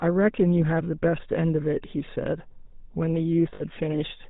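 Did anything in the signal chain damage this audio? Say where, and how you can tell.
Yes. At the codec stage, the whole clip carries the buzzy, gravelly roughness of the GSM full-rate codec, with nothing above 4 kHz. Plain band-limiting would sound dull but smooth. This grit comes from the vocal tract being driven by regularly spaced pulses, which fits 13 kbps full rate.

Over the network, lost GSM frames hit from 3.54 to 3.62 s. For 60 ms the sound is held as a rough metallic ring, which suggests three frames lost. Instead of a silent gap or click, the decoder repeated the last good frame.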